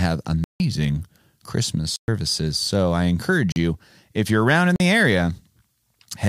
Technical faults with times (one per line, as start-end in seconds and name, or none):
0.44-0.60 block of digital silence
1.96-2.08 block of digital silence
3.52-3.56 block of digital silence
4.76-4.80 block of digital silence